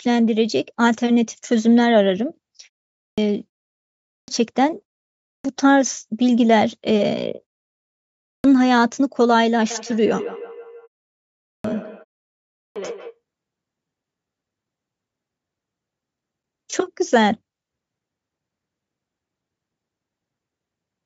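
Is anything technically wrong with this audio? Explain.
Yes, there are two faults.

Clipped start after a pause, at 2.94, 4.05, 5.2, 8.18, 11.4 and 12.49 s: the output device sleeps during short silences of 0.33 to 0.79 s and is slow to wake, so about 0.23 to 0.27 s is lost each time. Speech resumes abruptly, already mid-sound.

Feedback echo between two devices, from 9.7 to 13.2 s: a second device in the same room replays the call, and the first microphone picks it up again, beyond its own echo canceller's reach. Each sound returns roughly every 150 ms, about 14 dB below the speech, thin and ringing.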